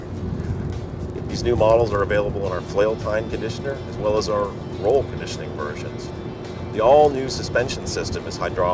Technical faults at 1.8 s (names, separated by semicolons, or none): resampler restarted on every block